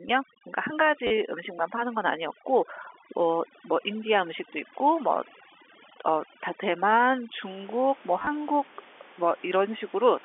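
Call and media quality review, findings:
Overdone noise removal, 0 to 7.4 s: background gone to near silence with twinkly specks. Noise suppressor cranked too hard on the room noise. It's chopping whole frequency bands near its noise estimate, taking quiet speech detail with them.

Packet loss with last packet repeated, 1.07 to 1.11 s: short robotic stutter, about 40 ms lost. Jitter buffer or concealment is replaying the last packet. Buzz suggests roughly 10 ms packets, so about 100 Hz.

Same again, 8.19 to 8.27 s: about 60 ms lost, scattered over 80 ms, longest gap around 20 ms. Several brief stutters rather than one. Same repeat-last-packet concealment, with the same 10 ms packet feel. The G.711 line band of roughly 250 Hz to 3.5 kHz stays audible throughout.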